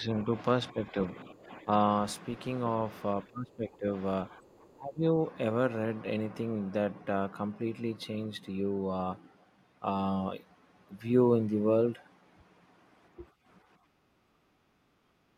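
The speech dips and thins at 0.0–0.3 s, 0.71–1.7 s, 3.24–3.87 s, 4.3–5.17 s and 14.11 s, by up to around 20 dB. This is likely speech suppressed in double talk, with the echo canceller ducking the talker. From 14.44 to 15.13 s the room tone drops by about 13 dB, background gated by the echo canceller while the loudspeaker plays.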